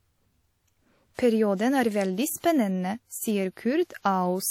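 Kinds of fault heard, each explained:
WMA compression: The speech carries plainly audible codec damage throughout, a ringing, washy quality with hiss that swells and fades along with the signal, and the likely cause is WMA encoding at a rate that fits roughly 48 kbps. A transform codec like this works on long blocks, so its quantisation noise smears across tens of milliseconds around each sound, and at a rate this low the weaker spectral components get dropped entirely.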